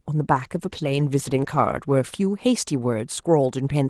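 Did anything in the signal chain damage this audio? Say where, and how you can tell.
Yes, a call bitrate drop from 0.34 to 2.41 s, at the network and codec stage. The connection's bandwidth estimate fell, so the Opus encoder was told to cut its rate from 32 to 16 kbps, bottoming out for about 1.3 s. With half the bits, each frame is quantised more coarsely, and the sound turns rough and watery. Once the rate returns to 32 kbps, the sound regains the cleaner 12 kHz call bandwidth.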